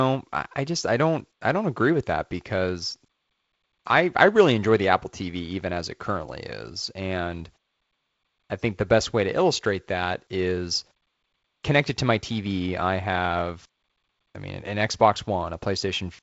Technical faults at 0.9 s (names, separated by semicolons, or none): none